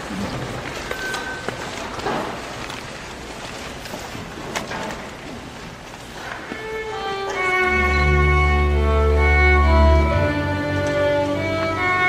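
At 6.55 s there's a short dropout, about 7.5 ms long, which fits a single lost LC3 frame, so this is lost LE Audio frames. When a frame goes missing over the Bluetooth LE link, the LC3 decoder fills the hole by reusing the previous frame's spectrum with randomised signs. For one frame that's too brief to fade toward silence, so what you get is a tiny noisy smear in place of the real sound. The light lossy compression on the clip leaves only mild codec texture.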